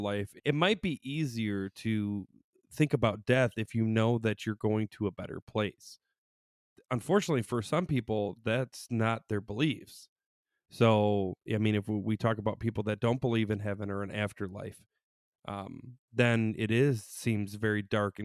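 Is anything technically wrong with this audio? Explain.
No, nothing technically wrong here.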